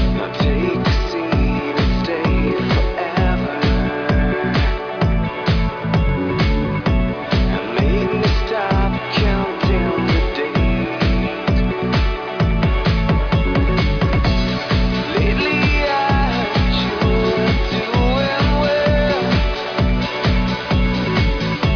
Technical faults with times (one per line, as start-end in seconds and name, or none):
none